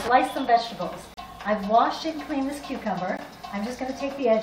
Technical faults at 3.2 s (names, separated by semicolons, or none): gap at a join of encoded pieces